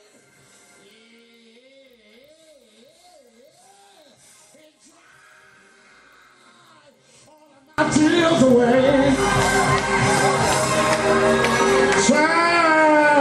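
From the start to 7.78 s, the mono sum drops by about 35 dB to a faint residue, likely from one channel inverted, where reversed polarity cancels everything shared. The waveform shrinks to a sliver and the spectrogram goes nearly dark until full level returns.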